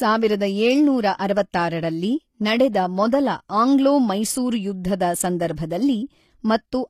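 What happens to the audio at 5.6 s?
At 5.56 s a pre-echo lasting about 17 ms sits just ahead of a sharp attack. The transform codec spread its quantisation noise across the whole block, so noise scaled to the loud onset leaks into the quiet gap before it, giving a brief hiss and a smeared attack.

Around that moment, as throughout the speech, the treble has a gritty, metallic quality, with nothing above 15 kHz and harmonics that fail to line up in the upper range. The likely cause is HE-AAC compression, whose spectral band replication rebuilds the high band from copied lower bands. The plainly audible damage fits a low bitrate of about 24 kbps.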